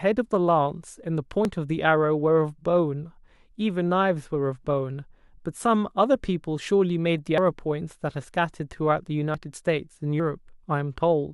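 Four abrupt forward jumps in the speech occur at 1.45, 7.38, 9.34 and 10.20 s, with no gap of silence. Each skips roughly 40 ms, except the longer one at 7.38 s, about a tenth of a second. These are likely dropped buffers (overrun).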